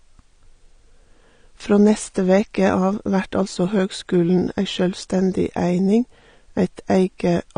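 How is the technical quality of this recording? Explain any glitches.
The recording is technically compromised in two ways: codec damage that runs the whole length, and a regular series of clicks through most of the clip.

Throughout the speech, the top end stops at about 9.7 kHz, and the sound is plainly dull and smeared. This is likely AAC compression at a low rate, consistent with AAC-LC near 32 kbps. The encoder discards high frequencies and coarsely quantises the remaining bands.

From 1.40 s to 7.08 s there are about four clicks, spaced 1.9 s apart. These are likely clock drift buffer slips. Two independent clocks differ by roughly 100 ppm, so the buffer periodically drops or repeats a block of about seven samples, producing a brief discontinuity.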